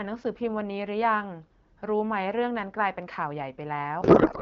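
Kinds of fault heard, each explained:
Codec payload misread: from 4.01 s to the end at 4.42 s, the speech is suddenly replaced by garbled noise and warble that barely tracks it. The receiver is unpacking octet-aligned AMR frames as if they were bandwidth-efficient, so every field sits a few bits off and the decoder builds sound from the wrong parameters. The AMR wideband stream before this, likely around 12.65 kbit/s, carries the speech clearly with only light coding damage.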